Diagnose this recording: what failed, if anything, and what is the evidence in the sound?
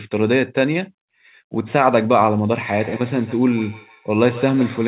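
Call processing failed here: a second device in the same room was on the call, and its playback leaked into the first device's microphone, where the echo canceller could not remove it. The result is feedback echo between two devices. From 2.74 s to the end, each stretch of speech returns at roughly 150 ms intervals, thinner and ringing, peaking at about 17 dB below the speech, heard within the narrowband sound that stops at 4 kHz.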